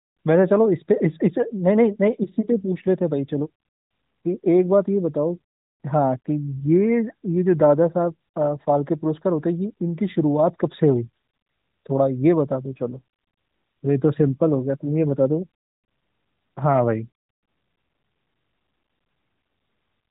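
No technical faults can be heard anywhere in this speech clip. It passes through the AMR narrowband mobile codec, so nothing above about 3.8 kHz comes through, and the light coding damage fits the codec's highest 12.2 kbps mode.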